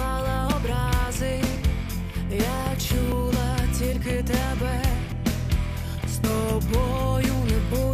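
At 0.52, 1.56, 3.12, 5.12 and 6.24 s the sound skips abruptly forward, with no gap of silence. Roughly 70 ms goes missing at 0.52, 3.12 and 5.12 s, and about 40 ms at 1.56 and 6.24 s. The likely cause is a dropped buffer (overrun): the capture side failed to read its samples in time, the hardware overwrote them, and the surrounding audio was spliced together directly.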